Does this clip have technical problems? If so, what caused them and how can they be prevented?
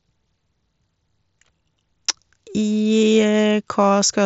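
No, there are no technical problems in this speech.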